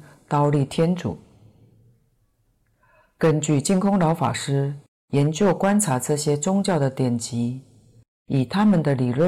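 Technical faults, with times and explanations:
Throughout: hard clipping. The speech is driven about 8 dB beyond what some stage in the chain can pass, so every peak above the ceiling is sliced flat. Only a small share of the samples, around one in fifty, actually hit that limit, but each flattened top throws off harmonics high in the spectrum. The result is a gritty, crackling edge that flares on the louder syllables.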